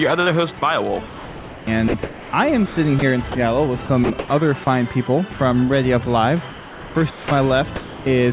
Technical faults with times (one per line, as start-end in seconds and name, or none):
0.59-3.35 sound chopped by the voice detector
3.86-4.67 sound chopped by the voice detector
5.33-5.39 sound dropped by the voice detector
6.50-8.06 sound chopped by the voice detector